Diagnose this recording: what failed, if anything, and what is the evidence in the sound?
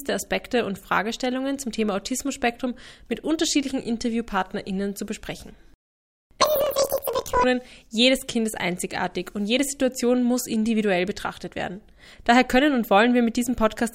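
Sample-format conversion: planar audio read as interleaved, 6.42 to 7.44 s. Each 26.12 ms block plays twice at double speed, an octave up, with 38.3 Hz vertical striping on a spectrogram.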